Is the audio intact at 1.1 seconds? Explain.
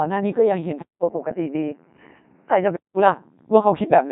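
No. At 1.1 seconds the speech carries the Codec 2 vocoder damage heard throughout. The decoder rebuilds the voice from pitch, voicing and a spectral envelope rather than the original waveform, so it sounds robotic and buzzy. The spectrogram shows regular synthetic harmonic stripes and nothing above 3.8 kHz, with a heavy sound that fits a rate of about 2.4 kbit/s.

The moment also falls inside a stretch from 0.82 to 2.97 s where the sound turns duller and boxier, likely because the input switched to a poorer device. The waveform shows a roughly 200 ms gap at 0.82 s and a level a few decibels lower after it. The spectrogram shows content stopping near 3 kHz, with a faint new noise floor well below the speech.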